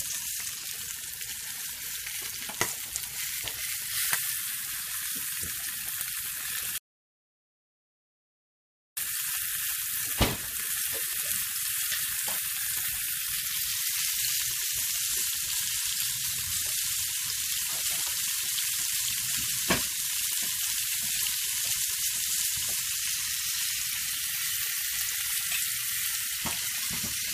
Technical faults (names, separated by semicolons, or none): audio dropout to silence